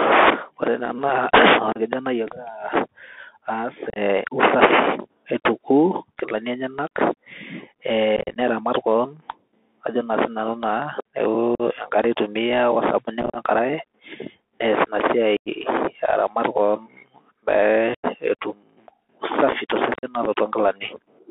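Throughout, the speech carries the Bluetooth CVSD headset codec, which fits a 64 kbps link: band limited to about 250 Hz to 3.6 kHz, with scratchy sibilants and granular hiss.

Unconcealed Bluetooth headset packet loss cuts abrupt holes at 1.73, 3.90, 8.16, 11.55, 13.22, 15.37, 17.94 and 19.94 s. The holes last from 30 to 112 ms, and several are scattered into choppy bursts.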